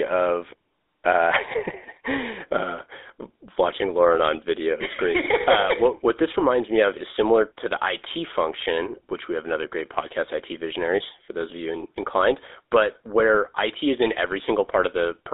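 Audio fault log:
Throughout: GSM full-rate codec. Pulse-excited vocal-tract modelling gives plainly audible buzzy, gravelly roughness, consistent with a 13 kbps stream. The spectrogram is empty below 300 Hz and above 3.7 kHz.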